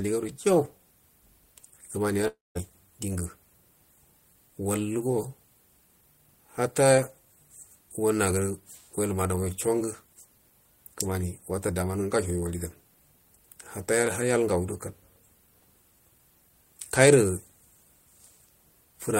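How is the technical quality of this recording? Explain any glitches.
The speech has one clear glitch, a gap from 2.27 to 2.57 s that is likely a long network dropout. The last sound before it is held and repeated as a fading buzz, leaving about 0.19 s of silence before the speech resumes with roughly 0.28 s of audio missing. On a spectrogram, smeared horizontal bands decay into a blank column, then sharp onsets return; the waveform shows a shrinking envelope, a flat line, and an abrupt restart.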